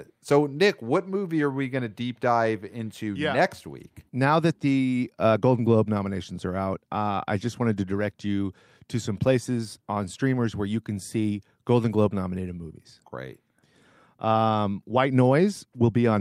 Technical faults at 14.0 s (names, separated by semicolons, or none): none